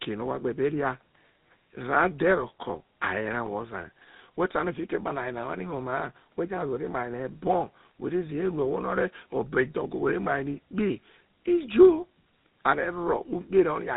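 This is speech carrying tandem speech coding from start to finish. The roughness, muffling and warble point to two speech coders in a row, likely CVSD then GSM full rate, the second re-coding the first's output. Nothing is heard above 3.8 kHz.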